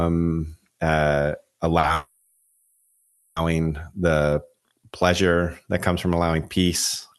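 At 1.79 to 1.85 s there is a short stall from a late packet. A packet missed its slot and the jitter buffer ran dry. The receiver held the last sound for about 40 ms, then resumed in the same place. Nothing is lost. The sound just hangs briefly with a slight buzz or dip.

From 1.94 to 3.38 s there is a call audio freeze. The sound is stretched into a fading buzz or hiss for 1.42 s. It never drops to silence. Then it picks up exactly where it stopped, with nothing skipped. The likely cause is packets held up in transit, which emptied the buffer again.

From 4.29 to 5.30 s there is a jitter buffer slow-down, ending just before "that comes from allowing". The receiver repeated pitch periods to rebuild its reserve. It added about 113 ms. Speech runs at 90% speed at the same pitch, so sounds are drawn out. All of this comes through a WebRTC call path with Opus, whose bandwidth stops at 12 kHz.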